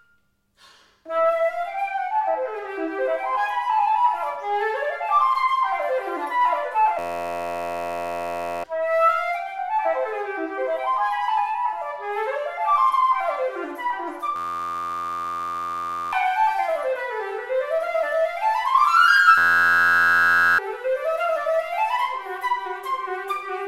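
At 6.99 s the sound locks into a system hang loop: the machine stalled while the audio hardware kept replaying its ring buffer. An 11.61 ms slice, which fits a 512-sample buffer, repeats until 8.64 s, giving a steady 86 Hz buzz and losing about a second and a half of audio. It happens again from 14.36 to 16.13 s, losing around two seconds, and from 19.38 to 20.58 s, losing about a second.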